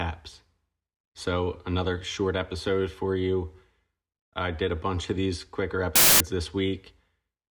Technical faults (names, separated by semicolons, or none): samples built from the wrong bytes